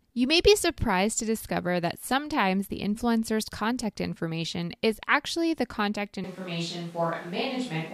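From 6.24 s to the end, the speech abruptly turns roomy, hollow and bass-light, with room noise audible beneath it, likely a switch to a distant microphone.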